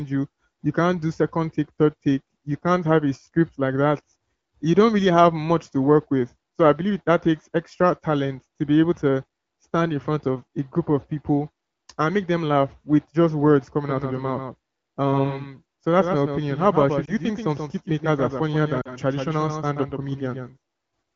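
From 13.87 s, right after "laugh with just words", a doubled audio track appears and runs to the end. A second full-band copy trails the speech by roughly 150 ms at about 5 dB below it. The likely cause is a second, slower capture path or two misaligned copies in an edit. Unlike room echo or reverb, it is a single repeat with no decay tail and no room colouring, and it starts abruptly rather than building.

At 17.05 s a lost AMR speech frame leaves a 20 ms gap, and at 18.81 s two consecutive lost frames leave 40 ms. The decoder fills each gap by reusing the last good pitch and vocal-tract settings at falling gain, so the single lost frame warbles briefly or dips, while the two-frame run fades to near silence. The longer gap lasts long enough for the speech to falter before it comes back. The AMR wideband (HD Voice) coding underneath carries only light codec colouring, consistent with one of its higher rates.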